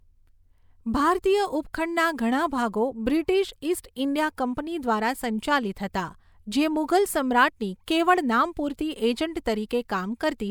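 Nothing in this speech recording stood out as a technical problem on listening.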